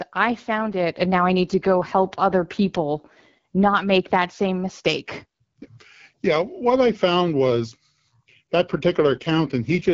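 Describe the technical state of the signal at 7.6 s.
At 7.6 s the speech comes through intact, carried by the AMR wideband (HD Voice) codec at 12.65 kbit/s with no dropout, distortion or other fault at that point.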